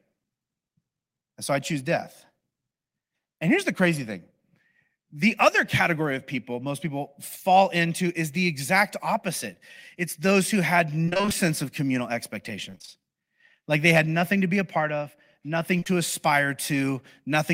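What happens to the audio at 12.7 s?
At 12.70 s the speech breaks up with repeated packet loss, giving a robotic sound until 13.02 s. Over that third of a second, five short holes open in the stream, the longest about 28 ms. Each hole is filled by stretching the sound just before it. About half the span is this patched material. The result is choppy and robotic, with roughly 100 ms of the real signal missing.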